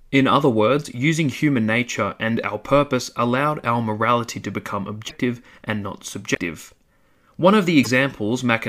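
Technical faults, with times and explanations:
5.08–5.11 s, 6.34–6.39 s and 7.83–7.87 s, broken MP3 bit reservoir: three short glitches, 32 to 52 ms long, where the audio jumps ahead and comes out garbled for an instant. The likely cause is missing 26.1 ms MP3 frames, which leave the next frame reading its borrowed bits from the wrong data.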